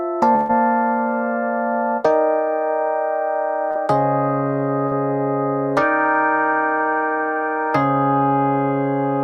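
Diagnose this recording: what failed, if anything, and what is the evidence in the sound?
Network burst of packet loss at 0.35–0.51 s: roughly 140 ms never arrived, so the receiver stretched the last sound and faded it, appearing as smeared, decaying bands before an abrupt resumption.

Short concealed packet loss at 3.71 and 4.87 s: about 40 ms dropped each time, filled by extrapolation, giving brief blurred patches on a spectrogram.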